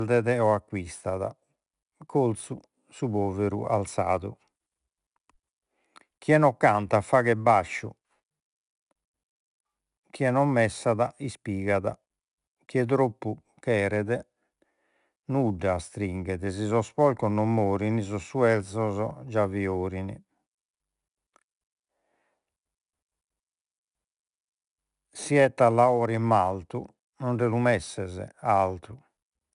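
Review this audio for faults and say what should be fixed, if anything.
Throughout, 4-bit ADPCM compression encodes each sample as a coarse step from a prediction, so gritty, level-following hiss rides on the speech, with nothing above 10.6 kHz. Store or deliver the audio as uncompressed PCM or a modern perceptual codec at an adequate rate instead of 4-bit ADPCM.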